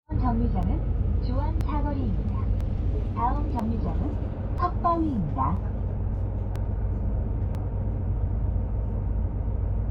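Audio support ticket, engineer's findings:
Overlap between stream segments: short clicks or skips at 0.63, 1.61, 2.61, 3.59, 4.58, 5.57, 6.56 and 7.55 s, one per second, matching 1.0 s segments. Segment joiner trims 6 to 20 ms of real audio at each boundary, causing waveform jumps.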